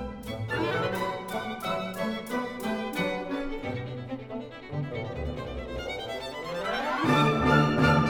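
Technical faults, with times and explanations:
Nothing stood out on listening that would count as a technical fault.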